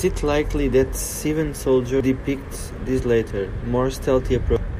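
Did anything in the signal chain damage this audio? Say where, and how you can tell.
Yes. The damage is at the codec stage, from damaged data in a compressed stream. A brief blip lands at 2.00 s, just before "depicts this", and a second, longer glitch runs from 4.56 to 4.65 s near the end of the speech. Corrupted bytes in the encoded data make the decoder misread those frames and lose sync. It searches for the next valid frame header and resumes normal decoding.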